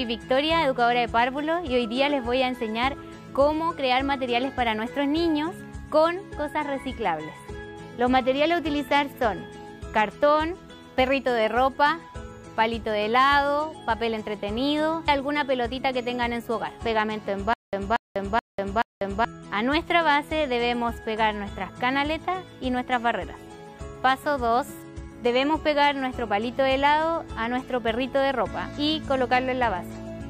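From 17.53 to 19.25 s, a stutter with silent gaps: a 234 ms fragment repeats four times, each followed by about 194 ms of dead silence, likely a stalled stream retrying.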